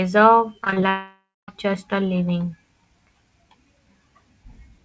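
From 0.64 to 0.83 s the speech turns choppy. This is repeated packet loss, heard as a robotic sound. Five short holes open within that fifth of a second, none longer than about 21 ms. Each is patched by stretching the sound just before it, and concealment covers roughly half the span. Real speech keeps returning between the patches, which sets this apart from a single long gap: the sound stutters instead of disappearing.

Shortly after, from 0.89 to 1.49 s, about 0.59 s of audio is gone, most likely from a long network dropout. The last sound is carried on as a buzz or hiss that fades out, leaving roughly 0.21 s of silence before speech resumes at "just a living" with the missing portion never recovered. Unlike the stutter before it, nothing real breaks through. There is one unbroken hole that decays to silence. The call path's G.722 coding keeps everything below 8 kHz.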